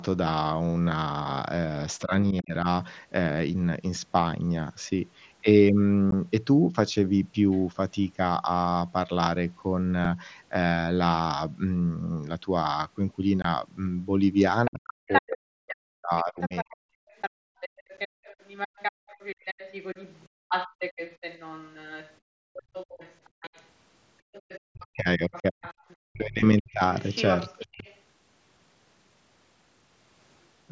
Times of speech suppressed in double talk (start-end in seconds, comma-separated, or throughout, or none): 2.02-2.66, 14.68-16.81, 24.62-27.87